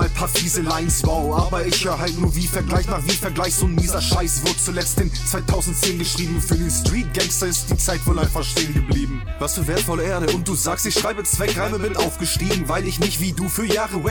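Nothing in the audio stands out as a technical fault at any point, so there's no trouble to report here.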